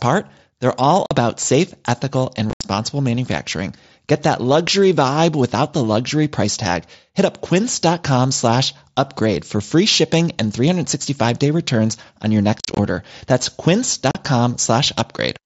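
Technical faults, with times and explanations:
1.06 to 1.11 s, unconcealed Bluetooth headset packet loss: a single hole of about 45 ms where voice packets between headset and phone never arrived and nothing filled the gap, so the speech drops to silence with hard edges.
2.50 to 2.64 s, unconcealed Bluetooth headset packet loss: about 105 ms of packets lost, spread over 135 ms with a longest run of 75 ms, giving a chopped, stuttering break rather than one clean dropout.
12.59 to 12.79 s, unconcealed Bluetooth headset packet loss: about 128 ms lost, scattered across 195 ms in runs no longer than about 38 ms, so the voice turns rough and crackly as many short unfilled holes follow one another.
14.11 to 14.15 s, unconcealed Bluetooth headset packet loss: a brief hole of about 38 ms with sharp edges, the speech cutting out and back in, since no concealment replaces the missing packets.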